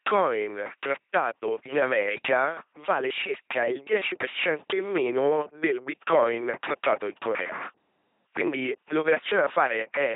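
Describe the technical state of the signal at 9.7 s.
At 9.7 s the speech is under the LPC-10 vocoder, as it is throughout the clip. The speech is rebuilt from a short all-pole model of the vocal tract, driven by either a buzzing pulse train or plain noise, never a mix. Here the damage is heavy: a harsh, mechanical robot voice with buzz or hiss wherever the voiced/unvoiced call misfires, nothing above 3.8 kHz, and a coarseness that fits a 2.4 kbit/s coding rate.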